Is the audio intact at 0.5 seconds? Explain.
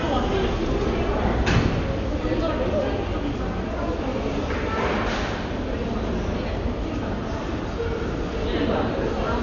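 No. At 0.5 s, as throughout the clip, the sound is dull with nothing above 7 kHz, and a rough, fluttering noise clings to tonal parts. This is likely heavy Dolby Digital compression at a very low bitrate, around 48 kbps, where the encoder narrows the band and leaves starved frequency lines for the decoder to fill with dither noise.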